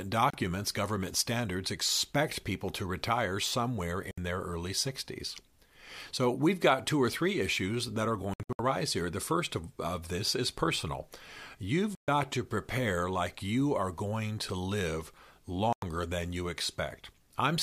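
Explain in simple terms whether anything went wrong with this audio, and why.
Something did go wrong: the speech briefly drops out five times, a digital broadcast dropout. The receiver lost the signal and muted until good data returned. Gaps occur at 0.30 s (just before "government standards expect people"), 4.11 s, 8.34 s (just after "three issues that are", several short holes over about a quarter second), 11.95 s (before "to prepare like you") and 15.73 s. Each hole is a multiple of about 32 ms. The muted chunks are clean silence, not garbled or repeated sound.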